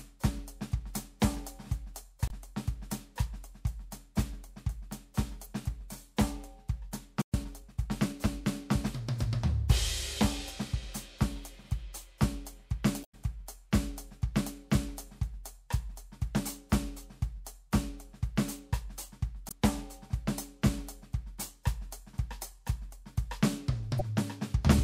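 At 2.26 to 2.31 s the music is briefly disrupted. This is damaged data in a compressed stream: bytes in that stretch of the file were lost or corrupted, so the decoder misread the frames, lost sync and hunted for the next valid frame header. It differs from a stall because the decoder is misreading damaged data rather than running out of data.

From 7.22 to 7.34 s the music cuts out for about 120 ms and then continues from the point where it stopped. This is a playback stall. The likely cause is that the player ran out of buffered data or its thread was briefly blocked, leaving nothing to send to the output.

Immediately afterwards, from 7.34 to 8.52 s, the player makes up the lost time with time-compressed catch-up. It trims small pieces from its backlog and cross-fades the joins, so the music runs about 1.1 times faster while keeping its original pitch. That constant pitch is what separates it from a speed or sample-rate error, where the pitch would rise.

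The same stream corruption comes back at 13.01 to 13.15 s, 19.48 to 19.52 s and 23.99 to 24.01 s. The first of these is the longest.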